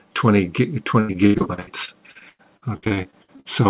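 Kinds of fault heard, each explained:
Repeated packet loss (robotic sound): from 1.0 to 3.47 s the audio turns choppy and robotic, with 22 holes up to 96 ms long. Lost or late packets were each patched by stretching the preceding sound, covering about 35% of that span.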